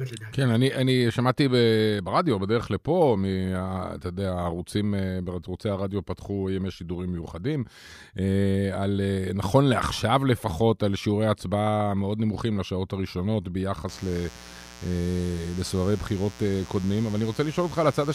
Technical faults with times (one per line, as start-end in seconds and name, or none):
13.89-18.14 mains buzz